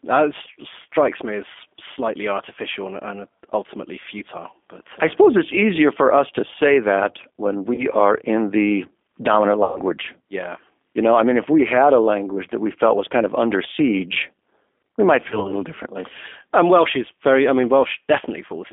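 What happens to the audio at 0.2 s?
At 0.2 s the speech is already passing through the G.729 codec, which runs for the whole clip. That codec rebuilds each 10 ms frame from a vocal tract filter, a pitch predictor and a few pulses, at about 8 kbit/s. The result sounds rough and synthetic, confined to a telephone band of roughly 250 Hz to 3.5 kHz. On a spectrogram nothing appears above 3.5 kHz, and there is a blank strip below 250 Hz.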